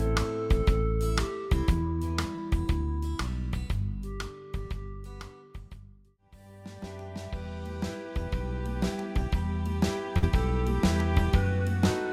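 At 2.35 to 2.39 s there is a short concealed packet loss. About 20 ms of audio never reached the decoder in time, so the receiver extended the preceding sound across the hole and crossfaded back. That brief stretch comes out as a small smear or wobble.

At 10.17 to 10.24 s there is a burst of packet loss. A longer run of data was lost or arrived too late to play. The receiver kept the last sound going for about 50 ms and faded it down. When the audio resumes, about 40 ms of the original is simply gone.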